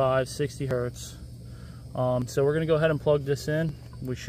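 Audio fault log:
0.71 s, 2.22 s and 3.69 s: dropped buffer (overrun), likely the cause of three abrupt skips, each with the sound jumping forward with no gap of silence. Around 10 ms goes missing at 0.71 s and 3.69 s, and about twice that at 2.22 s, where the segment was overwritten before being read. The waveform shows a sudden discontinuity at each splice, and the spectrogram shows a thin full-height vertical line with the texture on either side not quite matching.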